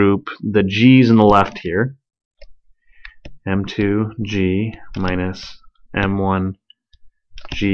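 No technical faults can be heard anywhere in the signal.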